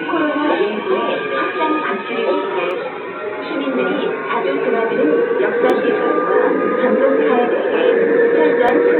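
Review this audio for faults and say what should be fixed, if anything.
Audio missing between chunks at 2.71, 5.70 and 8.69 s: the sound skips briefly each time, losing a sliver of roughly 15 ms, at a steady 3 s spacing. This likely comes from the recorder dropping a short piece as it closes one 3 s chunk and opens the next, then joining the two sides directly. To prevent it, use double-buffered or overlapping chunk handoff so capture never pauses between segments.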